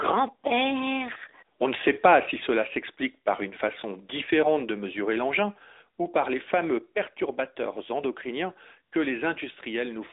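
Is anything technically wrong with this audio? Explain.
Yes. Throughout, the speech sounds thin, boxed-in and buzzy, with nothing above 3.8 kHz: AMR narrowband mobile codec damage, band-limited to 300 Hz to 3.7 kHz, plainly audible, consistent with a mid bitrate around 10 kbps.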